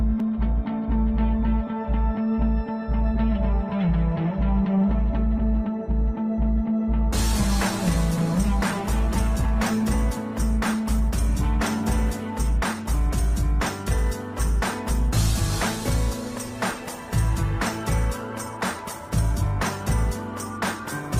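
The signal carries no audible technical faults anywhere in the recording.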